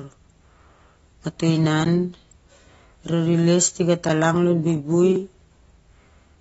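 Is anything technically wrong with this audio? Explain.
Yes, there are two kinds of fault.

AAC compression, throughout: the dull, smeared speech with nothing above 7.6 kHz is likely AAC-LC coding at a low bitrate, around 24 kbps. The encoder discards detail its hearing model deems masked and lowers the cut-off, so the codec damage is plainly audible as warbling, fizzy sibilants.

Block of digital silence, at 1.85 s (just after "mato inah"), 4.09 s and 5.16 s: the output briefly drops to zero for 11.6 ms, 5.8 ms and 1.7 ms. This happens either because the output buffer went unfilled or because a calculation produced invalid values. The first two fit 512- and 256-sample blocks. All are too short to register as silence and are heard as ticks or dips.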